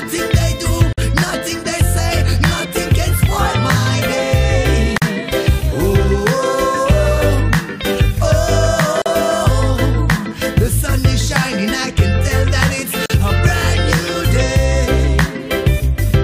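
Short silent dropouts cut into otherwise continuous sound at 0.93, 4.98, 9.02 and 13.06 s. The first lasts about 49 ms and the rest about 40 ms, all four seconds apart. They're gaps at joins of encoded pieces, where separately encoded chunks were butted together without trimming encoder delay and last-frame padding.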